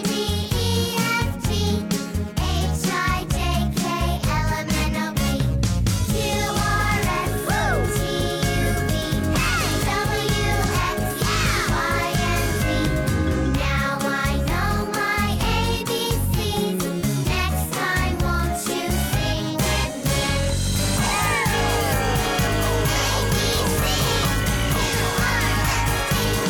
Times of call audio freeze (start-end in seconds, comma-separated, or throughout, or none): none